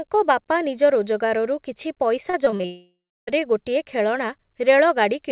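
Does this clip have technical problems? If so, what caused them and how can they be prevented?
Yes. From 2.3 to 2.65 s, repeated packet loss (robotic sound) leaves five short holes, the longest about 33 ms. Each is patched by repeating sound, so roughly a third turns choppy. Forward error correction and a deeper jitter buffer would prevent this.

From 2.65 to 3.41 s, the sound decays into a fading buzz or hiss, then about 0.33 s of silence. A long network dropout is the likely cause, with about 0.62 s never received. A more stable connection or redundant packet delivery would prevent this.

Throughout, the audio stops at 4 kHz, which fits the narrowband call codec.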